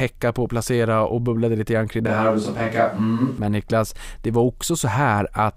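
Just after "bubblade lite grann kring", from 2.07 s to 3.38 s, the speech abruptly turns roomy and hollow, losing its bass, with background noise sitting roughly 35 dB below the voice, while the overall level stays about the same. At 3.38 s the close, full sound snaps back. This is a switch to a distant microphone, likely because the close microphone's signal dropped out and a more remote pickup briefly carried the recording.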